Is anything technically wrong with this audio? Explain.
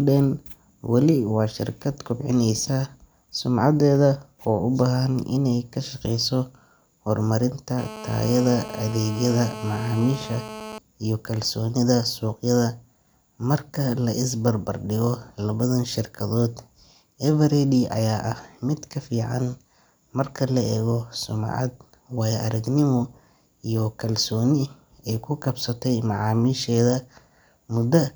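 Yes. From 7.78 s to 10.78 s the speech is overlaid by GSM phone buzz. A 2G handset close to the recording chain was transmitting its bursts about 217 times a second, and the audio circuitry rectified those radio pulses into the signal path. The result is a hard, raspy buzz pitched at roughly 217 Hz, rich in harmonics and unrelated to the speech, sitting about 14 dB below it. Its steadiness across the three seconds fits a phone on a call.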